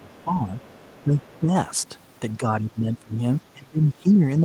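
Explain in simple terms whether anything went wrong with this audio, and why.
Speech suppressed in double talk happens from 0.0 to 0.58 s, 1.03 to 1.19 s, 1.39 to 1.51 s, 2.38 to 3.21 s, and from 3.54 s to the end. The speech dips or fades. Both sides were likely talking at once, and the echo canceller turned everything down.

The other side's voice is leaking through, faintly, at 0.12 to 0.24 s, 0.6 to 1.02 s and 1.2 to 1.39 s. Their voice, played on this talker's loudspeaker, likely got back into the microphone, and the echo canceller didn't fully remove it.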